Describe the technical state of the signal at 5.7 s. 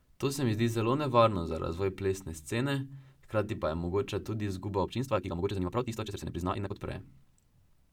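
At 5.7 s the signal sits inside a time-stretched section running from 4.82 to 6.80 s, just after "je mogoča tudi izguba". The speech there plays at about twice its natural pace, 1.99 times, yet its pitch does not rise. It sounds rushed, and the tempo jumps abruptly at both boundaries. The likely cause is time-compression software that kept the pitch fixed by discarding short slices of the waveform to shorten that stretch.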